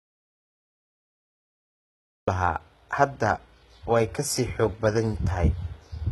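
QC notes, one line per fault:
throughout, HE-AAC compression: The treble sounds rebuilt rather than captured. Upper bands copied from lower ones leave s sounds gritty and lispy, with nothing above 11.8 kHz. The heavy damage fits a low bitrate around 16 kbps. This likely comes from spectral band replication, not from a plain low-pass, which would sound dull instead of falsely bright.
0.00–2.28 s, audio dropout to silence: The clip opens already in silence, with no room tone or hiss, until sound begins abruptly at 2.28 s. Silence that flat likely means the input was lost while silence kept being written, rather than a quiet room or a fade-in.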